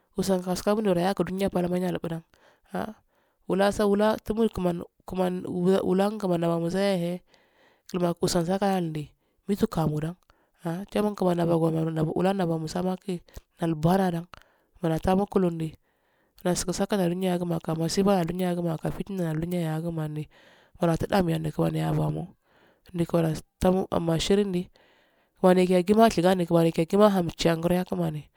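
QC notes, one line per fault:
No technical faults are audible anywhere in the speech recording.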